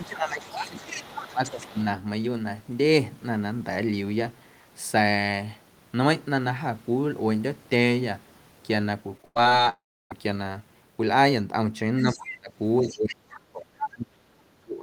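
Right from the start, 0.0 to 0.78 s, the speech is held down, with the deepest dip around 15 dB. This is speech suppressed in double talk. Both ends were likely talking at once. The echo canceller could not tell the local talker from its own loudspeaker echo, so it pulled everything down. A second, shorter dip follows from 1.31 to 1.76 s, again around 15 dB down.

Overlapping this, from 0.04 to 1.83 s, the other side's voice leaks through. It sits roughly 10 dB under the local speech. The far voice is likely played on a loudspeaker and picked up again by the microphone. The canceller did not fully remove it, so a second talker runs underneath.

From 9.17 to 9.67 s there is repeated packet loss, heard as robotic sound. Eight gaps arrive in half a second, the longest about 98 ms. Each hole is patched by stretching the last sound, and the next hole comes quickly. About 42 percent of that stretch is concealed. 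The result is choppy, with pieces missing.

A long network dropout follows at 9.69 s and lasts to 10.12 s. The last sound is drawn out as a fading buzz or hiss. Roughly 0.3 s of plain silence follows. Speech resumes with that piece lost. A stall in the network is the likely cause.

From 12.02 s to the end, speech suppression in double talk returns much harder. The dips reach around 30 dB. Inside this stretch the other side's voice leaks through three times: 12.05 to 12.37 s at roughly 15 dB below the speech, 12.82 to 12.98 s at roughly 20 dB below, and a brief burst at 13.82 to 13.88 s, only about 5 dB below.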